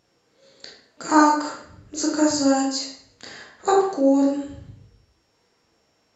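No technical faults can be heard at any point in the speech.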